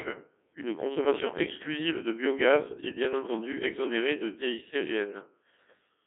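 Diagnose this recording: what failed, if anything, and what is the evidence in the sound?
Codec stage: the whole clip passed through a Codec 2 vocoder, heavily damaged, consistent with about 1.6 kbit/s. The speech is robotic and buzzy within 200 Hz to 3.4 kHz, rebuilt from sine waves, so a spectrogram shows rigid comb-like harmonics without natural breath noise.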